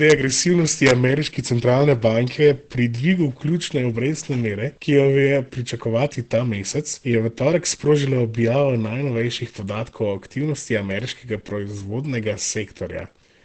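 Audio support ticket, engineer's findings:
Muffled, hoarse speech throughout, nothing above 8.7 kHz, heavy codec damage. Likely Opus compression in wideband SILK speech mode, consistent with roughly 12 kbps.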